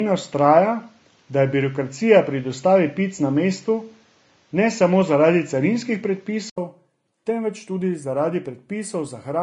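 It's a speech clip with plainly audible Vorbis compression throughout: hissy, grainy treble with nothing above 10.5 kHz, likely from encoding at a low bitrate around 30 kbps. From the start to 6.58 s the input has switched to a poorer device, likely a different microphone, with the band stopping at 7.6 kHz, a faint added noise floor and a level shift of roughly 5 dB, followed by an 80 ms gap at the switch.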